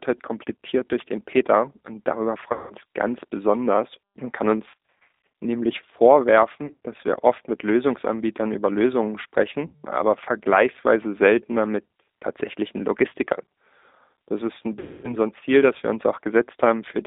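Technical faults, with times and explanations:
Throughout: G.729 codec. Speech sounds rough and synthetic and is confined to 250 Hz–3.7 kHz, which fits a low-rate coder rebuilding it from a vocal-tract filter and a few pulses.
2.53–2.74, 4.69–5.13 (after "ganz besonders und kann"), 6.66–6.75 (before "dass wir oft mit"), 9.67–9.87 and 14.79–15.16 s (between "ist ein" and "so ein"): VoIP packet loss concealed by the speech codec. The decoder extends the last pitch and filter into a fading buzzy tone or coloured noise, and speech stays weak briefly afterwards.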